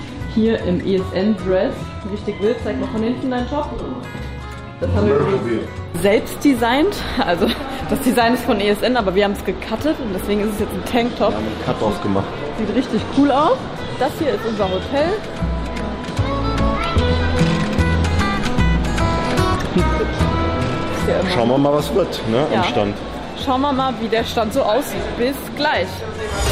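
Corrupt frame decoded: damaged compressed data played anyway. A short glitch at 1.80 s sounds like one frame's worth, peaking near -25 dBFS. A louder glitch, 21.83 to 21.88 s, suggests two frames, about -15 dBFS.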